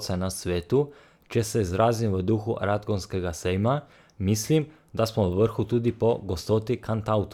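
No audible technical faults.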